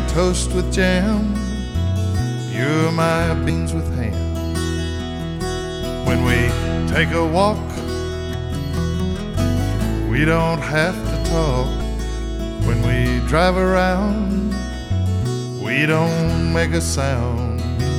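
Compressed frames are skipped at 7.76–7.82 s, 11.80 s and 14.91 s: about a tenth of a second of audio is lost each time, so the audio jumps ahead at each point.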